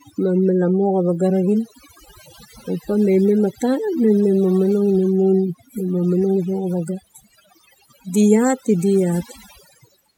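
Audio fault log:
throughout, overdone noise removal: in the gaps between phrases the background drops and breaks up into twinkling specks. A noise reduction stage was pushed far too hard on a noisy recording. It pulls individual frequency bands down or shuts them off whenever they sit close to its noise estimate. The quieter parts of the voice fall within that range, so they are stripped away along with the noise. The few bands that keep flickering through leave those glittering artefacts.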